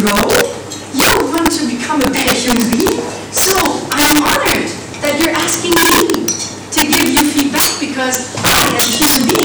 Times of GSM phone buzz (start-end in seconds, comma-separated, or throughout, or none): none